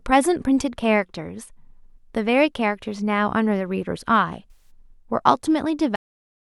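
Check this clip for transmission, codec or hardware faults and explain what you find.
Two faults can be heard in this speech clip: a concealed AAC frame loss and a cut-off end.

From 4.51 to 4.70 s there is AAC frame loss with concealment. Roughly 107 ms of coded audio never arrived, which fits about five consecutive AAC frames. The decoder patched the gap by reusing the last good spectrum with randomised signs and interpolated energy, so the speech turns briefly smeared and noisy, with a phasey wash. On a spectrogram the patch shows as a blurred block that repeats earlier energy without clear harmonics. The waveform envelope there looks flattened and noise-like.

At 5.96 s the clip suffers a cut-off end. The final buffers were never written or played, so the speech stops mid-sound and the remaining half-second is pure digital silence. Nothing decays. The level simply falls from speech to silence, and that abrupt step can produce a click. 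The waveform shows a vertical edge into a flat line. On the spectrogram every frequency ends along one sharp vertical boundary, followed by blank space.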